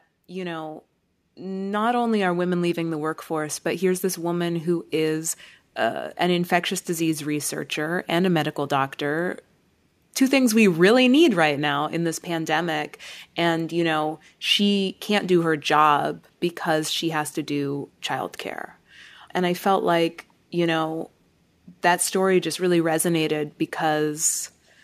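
Automatic gain rising runs from 0.28 to 2.22 s in this speech clip, ending just before "are women leaving the". The gain control judged the input too quiet and stepped its level up by about 7 dB over roughly two seconds, so voice and background swell together.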